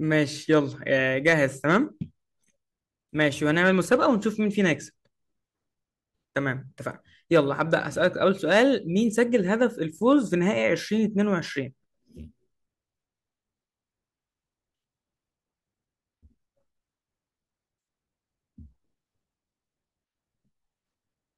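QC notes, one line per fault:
0.52–0.57, 1.27–1.76, 3.21–4.03, 7.35–8.61 and 10.11 s: hard clipping, with speech peaks overdriven by about 1 to 4 dB and cut flat. The crackle is abrupt and bright, not the rounded warmth of soft saturation.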